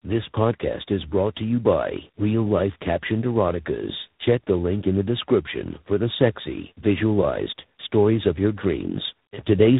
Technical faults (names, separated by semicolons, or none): tandem speech coding